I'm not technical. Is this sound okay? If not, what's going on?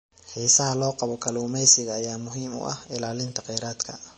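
No. MP3 compression damage runs through the whole clip, from start to finish. The sound has been squeezed hard to save space, likely by an MP3 encoder short on data. To cope, it throws away everything above about 8.3 kHz, so the speech sounds dull and muffled, and it drops quieter detail that flickers in and out, leaving a watery, swirly quality with metallic s sounds.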